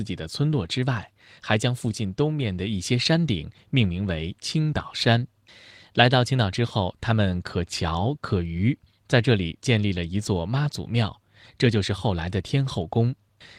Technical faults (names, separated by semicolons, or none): none